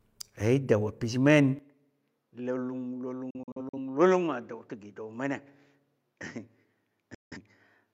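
At 1.59 s the speech abruptly narrows and drops about 10 dB, with nothing above 7.6 kHz and a new noise floor roughly 50 dB down, with no gap at the change. This is likely an input switched to a poorer device, which held to the end.

From 3.30 to 3.77 s a digital broadcast dropout punches several short holes, about 170 ms in total, the longest 43 ms, each with a 3 ms fade, which fits lost frames muting. A second dropout from 7.14 to 7.37 s removes another 170 ms.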